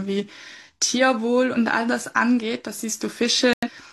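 Corrupt frames muted at 3.53 s: damaged compressed data was rejected by the decoder, leaving an abrupt silent hole until 3.69 s, consistent with two lost frames.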